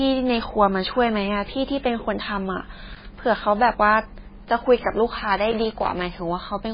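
An encoder starved of bits is the likely culprit throughout the speech, most probably MP3 compression at a very low rate, with heavy damage consistent with something near 16 kbps. To save data it discards the treble outright, leaving nothing above 5 kHz, and drops weak frequency lines that then flicker in and out between frames. The result is a dull, muffled voice carrying a watery, swirling texture, with sibilants turning metallic and chirpy and consonant onsets smeared.

From 2.94 to 3.06 s, and again from 5.51 to 6.05 s, a contact in the signal path makes and breaks repeatedly, the classic loose connector crackle. Each momentary break chops the signal, so these stretches are overlaid with an irregular spray of crackling and scratchy pops. The first burst is a brief rasp of about an eighth of a second, while the second runs roughly half a second and sounds more sustained.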